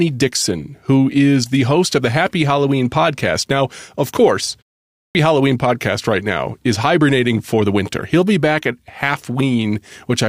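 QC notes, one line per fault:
4.92–5.15 s, clipped start after a pause: the output device dozed in the 0.38 s gap after "of course" and woke late, swallowing 230 ms, so speech restarts abruptly without its onset.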